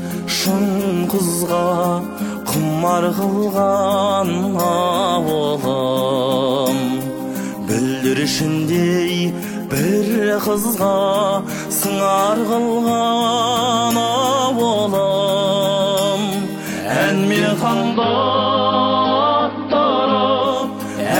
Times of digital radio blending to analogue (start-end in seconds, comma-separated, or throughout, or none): 17.49-20.87